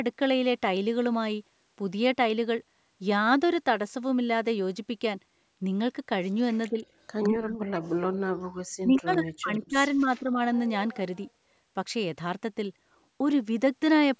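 Speech on a call shows speech suppressed in double talk. The level dips about 15 dB at 6.70 to 6.78 s, then drops as far as about 40 dB from 7.29 to 8.25 s and from 8.81 to 10.39 s. The echo canceller likely turned this talker down while the other side spoke. Echo leak is heard at 7.23 to 7.28 s, 9.63 to 9.69 s, 10.55 to 10.59 s and 10.93 to 11.29 s. A faint copy arrives 160 ms late, about 20 to 30 dB below the speech. It is likely loudspeaker sound that the canceller failed to remove.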